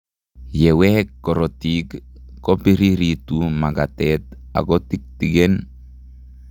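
Listening through this recording of speech, nothing stood out as a technical problem.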